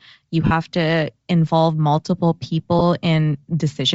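Throughout, the speech has a breathy, grainy upper edge, likely from Bluetooth LC3 compression at a low bitrate: a spectrogram shows patchy, noise-filled high frequencies instead of clean harmonics. Lost LE Audio frames at 0.46–0.52 s, just before "to involve multiple", and at 2.79–2.82 s, just after it, leave 50 ms and 20 ms smears where repeated, noise-signed spectra replace the speech. These appear as blurred, harmonic-less patches.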